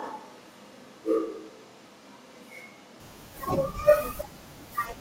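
Until 3.0 s the speech is roomy, hollow and bass-light, with room noise about 30 dB down, likely a switch to a distant microphone, ending abruptly.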